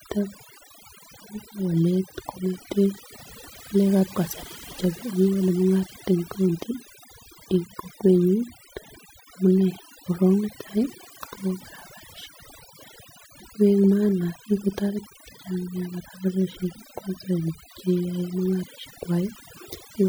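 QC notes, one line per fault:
Throughout: overdone noise removal. The noise reduction was pushed too hard, so individual frequency bands near the noise estimate are cut to nothing, taking quiet parts of the speech too. Unlike plain low-pass dullness, gaps fill with twinkling specks.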